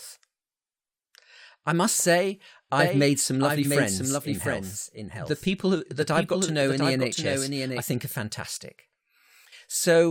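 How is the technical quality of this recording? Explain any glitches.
The recording has one clear glitch: a doubled audio track. From 2.79 s, right after "I must say", a second copy of the speech runs behind the original until 7.81 s, just before "think are fantastic". It trails by roughly 0.7 s at about 5 dB below the main signal, full-band and dry, with no room colour. It cuts in and out abruptly. The likely cause is the same speech being captured a second time through a slower path, or an edit leaving two copies out of step.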